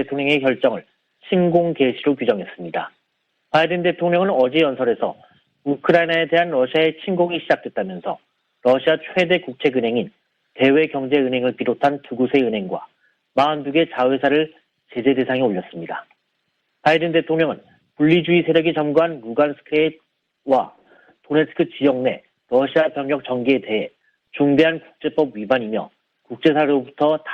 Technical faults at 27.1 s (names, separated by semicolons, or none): none